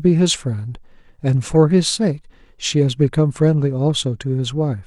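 No technical faults can be heard anywhere in the recording.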